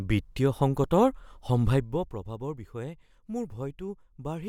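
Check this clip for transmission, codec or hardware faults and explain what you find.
Nothing in the speech points to a transmission, codec or hardware fault. The level rises and falls smoothly, as a fader would move it, with no abrupt jumps.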